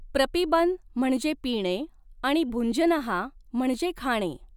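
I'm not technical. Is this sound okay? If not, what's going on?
Yes, the speech in this clip has no audible technical faults.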